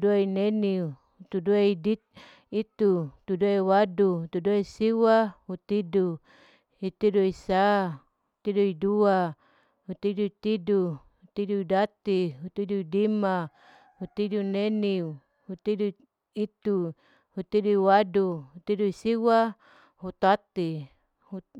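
Nothing in the recording stood out as a technical problem on listening.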